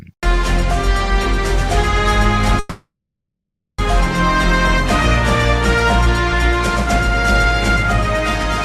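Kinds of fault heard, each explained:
call audio freeze: from 2.59 to 3.81 s a fading buzz or hiss stretches the last sound into about 0.9 s of silence, then it resumes intact, about 1.2 s late, likely from delayed packets draining the jitter buffer. Waveform: tapering tail, flat line; spectrogram: smeared bands fading out.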